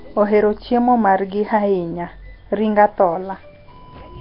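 Speech with likely Nellymoser compression throughout: a rough, hissy, smeared underwater sound from noise-filled empty bands, nothing above 5.3 kHz, and heavy damage suggesting about 22 kbps.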